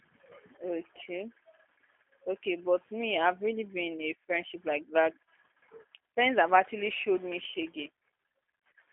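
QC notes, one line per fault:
throughout, G.729 codec: the speech has passed through a low-rate predictive voice coder, which fits G.729A at 8 kbit/s. It models each 10 ms frame as a vocal tract filter, a pitch predictor and a few excitation pulses instead of keeping the waveform. Combined with a telephone line band of 250 Hz to 3.4 kHz, this removes the lows and all the air above. The result is thin, boxy speech with a plainly audible rough, buzzy, synthetic edge.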